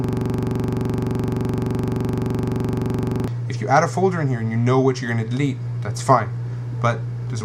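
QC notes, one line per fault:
0.00–3.28 s, system hang loop: already under way when the clip opens, a single 42.67 ms slice of audio repeats exactly, 76 times, while the system is frozen and the output hardware keeps replaying the same ring buffer. The fixed period fits a 2048-sample buffer. The loop recurs at 23.4 Hz, and it ends at 3.28 s.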